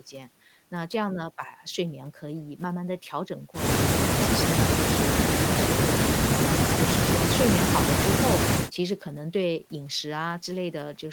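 Speech recording, with nothing technically wrong with it.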